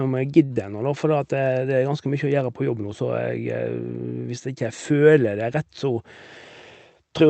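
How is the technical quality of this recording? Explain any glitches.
Two brief glitches sit right at the start, both just before "ennå da", in speech that has passed through a call codec whose limited top end fits Opus at around 32 kbps with audio capped near 8 kHz.

From 0.45 to 0.52 s a sound is held too long, with a faint buzzy dip. This is a short stall from a late packet: the jitter buffer ran dry, so the receiver stretched the last sound for about 44 ms until the packet arrived, losing nothing.

From 0.54 to 0.58 s there is a quick smear. This is short concealed packet loss: about 20 ms of audio never arrived, and the receiver filled the gap by extending the preceding sound before blending back.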